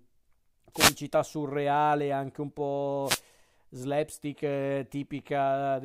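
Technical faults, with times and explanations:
0.73 to 0.96 s and 3.04 to 3.21 s, wireless microphone noise hit: brief bursts of static swish over the speech, the first just before "surreale anche un" and the second just after "surreale anche un", as the FM radio link fades through reflection cancellation and receiver noise rises.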